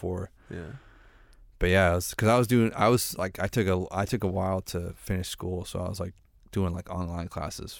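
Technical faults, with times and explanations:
No technical faults heard.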